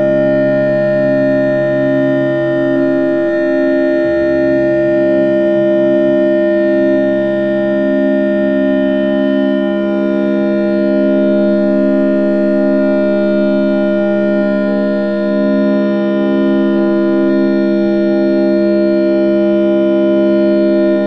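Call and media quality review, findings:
No transport, capture or playback faults found in the audio; no dropouts, clipping, timing or pitch anomalies.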